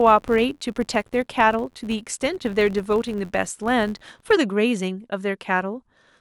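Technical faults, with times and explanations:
0.00 to 4.35 s, filter restarted on every block: a regular buzz at about 86 Hz rides on the speech, which fits a filter clearing its memory at every 512-sample block and starting each one from silence, so each block opens with a small transient. Unlike mains hum, this buzz rises and falls with the level of the speech, and unlike random clicks, its ticks fall at an even spacing.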